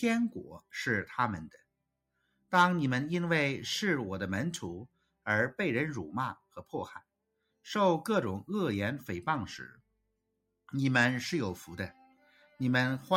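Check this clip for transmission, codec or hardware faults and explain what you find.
A speech-tuned noise suppressor was left running on non-speech sound, treating steady content as noise, so the level pumps and flutters by roughly 5 dB throughout.

The same noise suppressor cut sound more deeply at 1.53 to 2.52 s, 4.86 to 5.26 s, 6.35 to 6.74 s, 7.0 to 7.66 s, 9.72 to 10.7 s and 12.07 to 12.6 s. Sustained parts sink by up to about 22 dB, about 20 dB at 6.35 s and about 10 dB at 12.07 s.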